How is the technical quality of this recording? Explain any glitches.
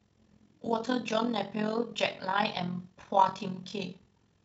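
The speech carries a fast, rough flutter from start to finish, a robotic tremolo pulsing around 40 times a second. That is overlap-add ripple: the windowed frames were rejoined with an overlap whose gains don't sum evenly, so the level dips by about 11 dB once per frame.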